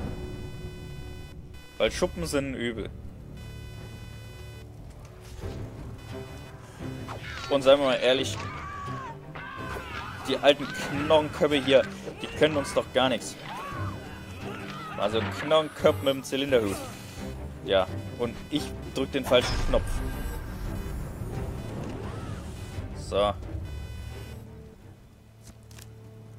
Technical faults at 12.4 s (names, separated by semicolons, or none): computer activity noise